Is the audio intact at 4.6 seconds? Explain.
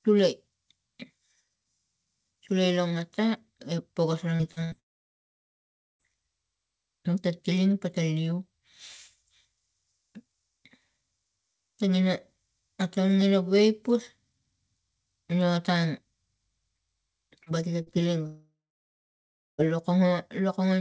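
No. Just after "ngata e pokas ra", two bursts of packet loss (4.51–4.59 s and 4.64–4.75 s) made the receiver stretch and fade the last sound, then resume with audio skipped.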